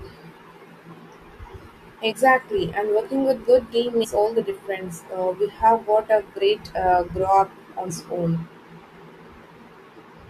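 At 2.11 s the speech lurches forward by about 70 ms. From 4.03 to 4.05 s, and again at 7.89 s, it lurches by about 150 ms. These are compressed frames skipped: whole 21.3 ms frames never reach the output, so the audio jumps by a multiple of that length. The gaps fit roughly three and seven frames.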